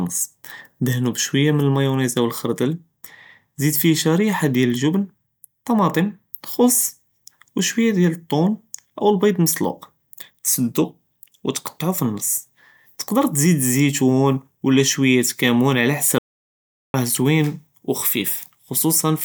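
At 16.18 s the speech cuts out mid-flow and doesn't return until 16.94 s, a stretch of roughly 0.76 s that's an audio dropout to silence. The gap is dead silence with no room tone at all, so whatever was said there is simply gone. That points to the input dropping away for a moment, likely a disconnected device, a failed link or a stray mute, while the recorder kept writing silence.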